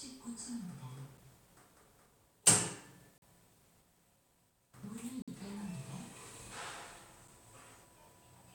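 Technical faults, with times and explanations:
1.17 s, 3.18–3.22 s, 5.22–5.28 s, 7.28 s: gap between stream segments. Silent holes of about 6, 41, 55 and 6 ms with hard edges recur every 2 s, where adjacent segment timestamps fail to meet and the player fills the shortfall with silence. No audio is lost.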